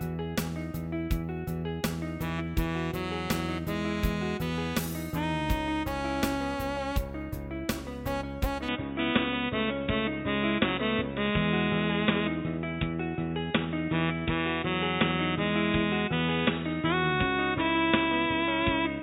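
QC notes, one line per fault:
8.69 s to end, input switched to a poorer device: capture likely jumped to a narrower-band microphone or headset profile. Without any gap, nothing passes above 3.8 kHz, so the sound turns dull and boxy, shifts level by a few dB, and gains new faint background noise.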